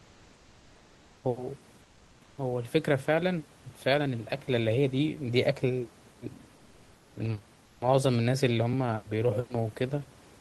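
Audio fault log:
0.00–1.23 s, 1.81–2.37 s, 7.65–7.81 s: comfort noise in place of the background. In these pauses the room hiss, about 32 dB below the loudest speech, becomes a steady, featureless noise about 2 to 3 dB quieter, likely Opus discontinuous transmission, with the receiver synthesising filler.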